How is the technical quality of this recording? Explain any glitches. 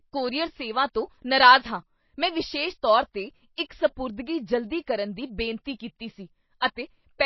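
The quality is poor, with plainly audible compression damage throughout the speech. The cause is likely MP3 compression at a very low bitrate, around 24 kbps. Nothing remains above 5.8 kHz, so s sounds turn dull, and starved frequency lines switching on and off give a watery, swirling texture. A spectrogram shows a flat ceiling at 5.8 kHz and flickering gaps below it.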